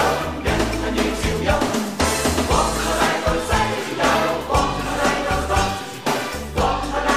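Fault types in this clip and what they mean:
DAB burbling: bit errors from weak DAB reception slip past error correction into the MP2 audio data, so wrong sample values inject brief noise blips into individual sub-bands, and any corrupted scale factors that get through make a sub-band jump in level for up to a frame. Here it occupies 2.00 to 2.19 s, a span that fits roughly ten damaged frames at an error rate of around a third of a percent. A spectrogram shows scattered short bright patches confined to narrow sub-band strips; the waveform shows blips.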